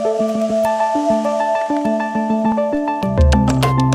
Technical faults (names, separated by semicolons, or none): DC step